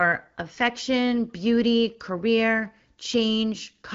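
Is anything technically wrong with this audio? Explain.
No, no technical faults here.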